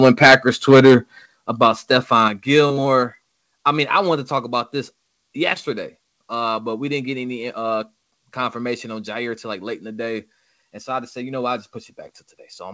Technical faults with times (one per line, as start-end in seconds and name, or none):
0.04-0.96 microphone overload
1.26 microphone volume stepped down
1.62-1.67 microphone overload
2.28 microphone volume stepped down